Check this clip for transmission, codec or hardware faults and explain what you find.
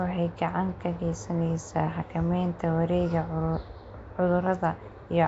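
Nellymoser compression runs through the whole speech clip, and the Flash-era Nellymoser Asao codec is the likely cause. The codec codes short blocks with a very small, fixed bit budget, so weak frequency bands get no bits and are filled with noise. Here the damage is plainly audible: a rough, hissy halo around the speech and a smeared, underwater quality, with nothing above 7.7 kHz. The coarseness fits a stream of about 32 kbps.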